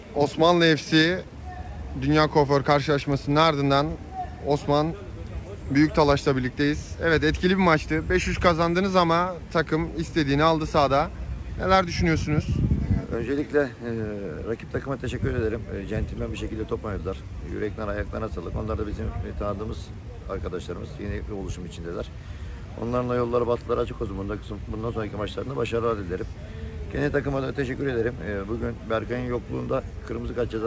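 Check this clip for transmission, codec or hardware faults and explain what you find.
No transmission, codec or hardware faults can be heard anywhere in the clip. The audio has passed through a working call path, and its content stops at 8 kHz, which fits a wideband codec such as G.722.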